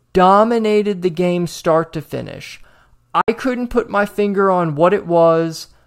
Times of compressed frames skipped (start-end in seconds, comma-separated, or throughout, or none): none